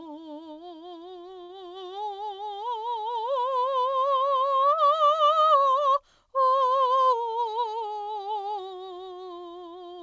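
At 1.44 s the music stalls briefly from a late packet: the jitter buffer ran dry, so the receiver stretched the last sound for about 51 ms until it arrived, then resumed where it left off. A held tone appears with a slight buzz or dip, and a spectrogram shows smeared, repeated partials through 1.51 s.

From 6.96 to 7.28 s a jitter buffer speed-up trims roughly 40 ms in short pitch-period pieces, playing about 111% fast at unchanged pitch. The tempo briefly rushes, and the waveform shows compressed beat spacing with small splice seams, all within the call codec's band ending at 8 kHz.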